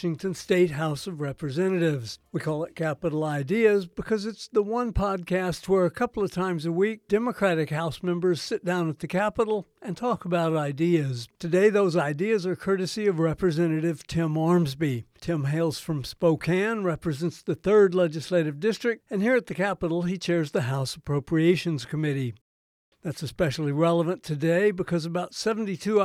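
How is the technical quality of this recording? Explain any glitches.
No glitches heard: no dropouts, clicks, level jumps or timing disturbances anywhere in the recording.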